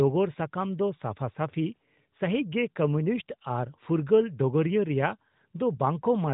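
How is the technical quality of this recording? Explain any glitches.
No glitches or faults heard.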